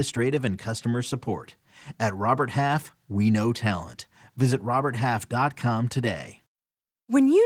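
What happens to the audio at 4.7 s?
Nothing goes wrong at 4.7 s: the speech continues intact through that moment, carried by Opus voice compression at 20 kbps with only light coding damage.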